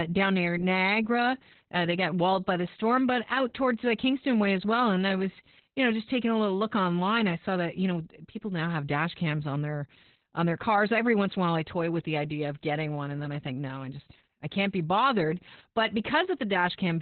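Throughout this speech clip the sound is muffled, hoarse and slightly robotic, with nothing above about 4.2 kHz. This is heavy Opus voice compression: the SILK coder, squeezed to narrowband at a rate that fits around 8 kbps, discards the upper band and codes the excitation coarsely.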